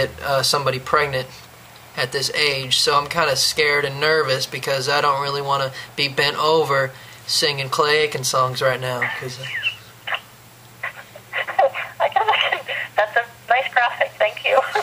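No technical faults can be heard anywhere in the clip. Nothing in the sound points to a problem in how the audio was captured or carried.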